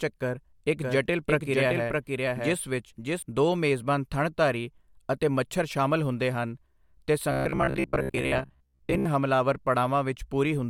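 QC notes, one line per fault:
0.83–3.23 s, doubled audio track: a second full-band copy of the speech runs roughly 0.7 s behind the original at about 5 dB quieter, most likely because the signal is being captured twice, once through a slower path, or an edit has left two copies out of step. The late copy carries no reverb tail or room colouring, so it reads as a clean, overlapping repeat rather than an echo, and it cuts in and out abruptly at the edges of the span.
7.32–9.05 s, robotic sound from repeated short buffers: beginning right after "ਹੁੰਦੇ ਹਨ ਤੇ", fresh audio reaches the output too rarely, likely because of buffer underruns, and the software covers the gaps by looping the last 15 ms or so, with around two thirds of the real signal skipped. Looping at that rate imposes a steady 66.7 Hz pitch, turning the speech into a stiff, metallic buzz that only loosely tracks the syllables.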